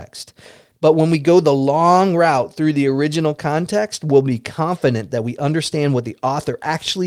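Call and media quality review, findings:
No faults found in this speech recording.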